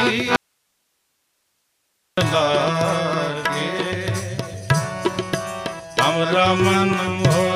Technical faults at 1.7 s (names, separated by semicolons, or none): audio dropout to a faint residue